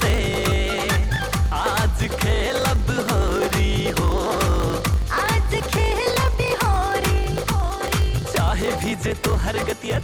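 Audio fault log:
throughout: block size mismatch (truncated). Dropped block tails cause a 50 Hz buzz and 1.07x playback speed, which fits 1024-sample written blocks.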